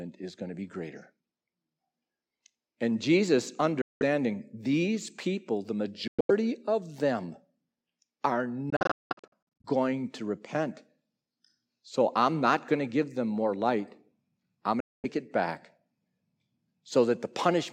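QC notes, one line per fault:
3.82–4.02 s, Bluetooth dropout: the speech cuts to silence for about 0.19 s, then resumes further along.
6.08–6.31 s, Bluetooth dropout: the same 0.19 s loss is broken into gaps across 0.21 s, the longest about 0.11 s.
8.70–9.65 s, Bluetooth dropout: the worst stretch, with 0.55 s lost in gaps spread over 0.94 s, the longest 0.19 s.
14.80–15.05 s, Bluetooth dropout: a 0.23 s silence. Each gap is likely audio packets arriving too late and being discarded, so playback skips ahead.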